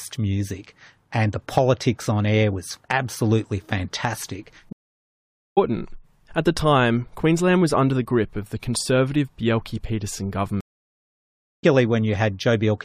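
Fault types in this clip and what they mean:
Stream reconnect: the connection dropped, playback went silent, then the player reconnected and started a new decoder partway through the stream. The speech cuts out at 4.73 s, right after "air was absolutely fantastic", for 0.84 s and picks up again about half a second further on. The second break starts at 10.61 s and lasts 1.03 s. It resumes roughly a second later in the content, so material is skipped both times.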